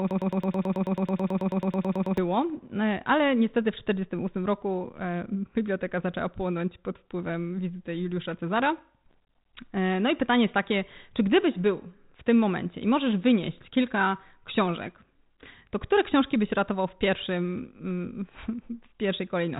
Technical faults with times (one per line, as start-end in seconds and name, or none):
0.00-2.18 broken-record loop
9.11-9.16 bit errors on an ADPCM link